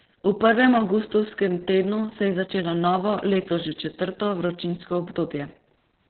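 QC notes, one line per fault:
Throughout, Opus voice compression: heavy damage, with nothing above 4.3 kHz, which fits the SILK coder running narrowband at a very low bitrate near 6 kbps. Coarsely coded excitation leaves the speech muffled, hoarse and slightly robotic, with all upper detail gone.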